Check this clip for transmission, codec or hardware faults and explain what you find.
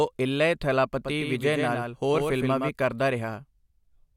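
One fault is present: a doubled audio track from 0.97 s to 2.69 s. The speech gains a flat, slapback-like repeat roughly a tenth of a second behind, about 5 dB quieter, with no room tail, switching in and out abruptly. A second, slower capture path mixing in a delayed copy is the likely cause.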